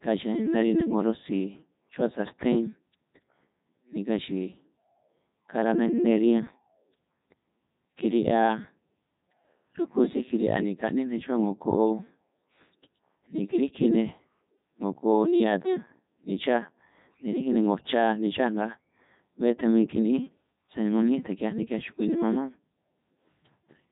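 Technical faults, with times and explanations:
Throughout, Codec 2 vocoder: the speech has been passed through a very low-bitrate digital-radio vocoder that transmits only pitch, voicing, loudness and a coarse spectral shape, then rebuilds the voice from sine waves rather than preserving the waveform. The result is heavily robotic and buzzy, and nothing above 3.8 kHz. The damage level fits Codec 2's top 3.2 kbit/s mode.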